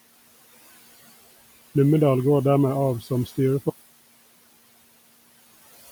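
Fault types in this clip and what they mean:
noise suppressor artifacts: Throughout, the suppressor pulls the steady background down by about 19 dB in every band it judges to be noise, frame by frame, so the room noise, sitting about 18 dB under the speech, dips between phrases and swells beneath them.
speech cut by the noise suppressor: From 3.01 to 3.37 s the suppressor mistakes part of the speech for noise and turns it down by as much as about 17 dB, roughly 150 ms in all, so the affected speech there sounds swallowed and faint.
audio dropout to silence: At 3.7 s the sound stops dead and stays silent to the end, with no room tone at all, which points to the input being lost, likely a disconnect or mute, while the recorder kept writing silence.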